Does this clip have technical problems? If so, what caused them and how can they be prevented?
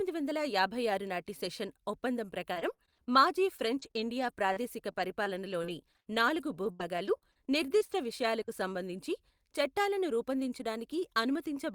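Yes. From 2.53 to 8.50 s the speech suffers repeated packet loss, heard as a robotic sound: nearly thirty short holes, the longest about 74 ms, each papered over by stretching the preceding sound, roughly a second rebuilt in all. Unlike a single dropout or a burst of clicks, the damage recurs steadily across six seconds, giving a choppy, robotic texture rather than silence. A wired or less congested connection with a larger jitter buffer prevents it.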